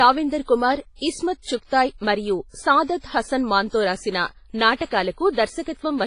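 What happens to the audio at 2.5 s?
At 2.5 s the speech carries heavy WMA compression damage that runs through the whole clip, likely from a low-bitrate encode around 24 kbps. Coarse transform quantisation smears ringing, washy noise across tens of milliseconds, and nothing survives above 10.4 kHz. The hiss breathing with the signal separates it from a simple low-pass filter.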